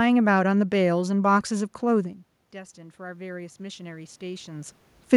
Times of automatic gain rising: 1.51-4.80

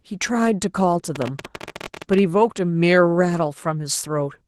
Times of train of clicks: 1.16-2.19

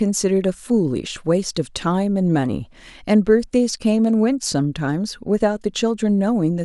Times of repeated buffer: 4.43

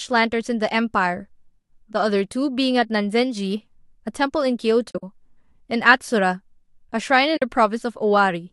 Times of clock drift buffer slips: none

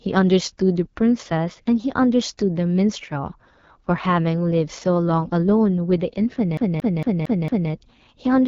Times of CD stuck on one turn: 6.57-7.71

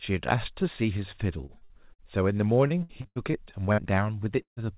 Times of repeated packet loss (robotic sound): 1.46-2.02, 2.68-3.38

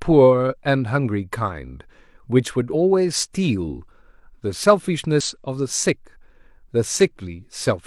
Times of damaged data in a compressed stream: 0.47-0.53, 2.70-2.74, 5.20

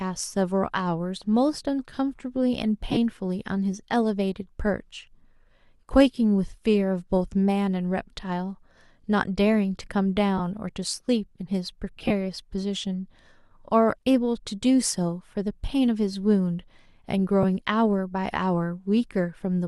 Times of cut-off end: none

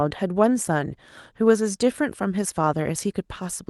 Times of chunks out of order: none

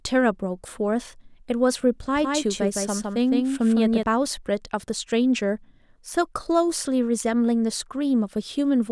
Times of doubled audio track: 2.15-4.03

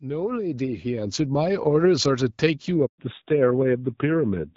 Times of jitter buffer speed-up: none

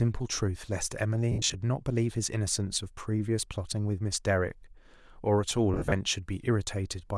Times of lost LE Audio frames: 1.32-1.54, 5.74-5.92

